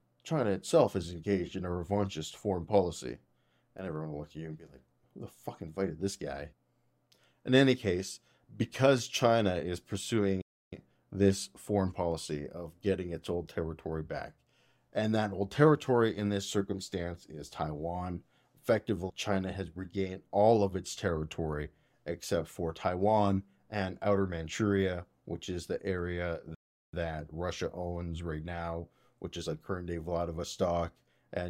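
At 10.42 s the speech cuts to silence for about 0.31 s, then resumes with "this foreign policy of". After "which is the area", at 26.55 s, it drops out again for 0.38 s. Each gap is a playback stall, likely the player running short of data.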